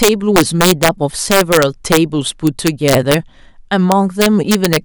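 It's a speech clip with integer overflow throughout: about 3 dB of overdrive sends roughly half a percent of samples wrapping to the opposite sign, giving harsh cracks.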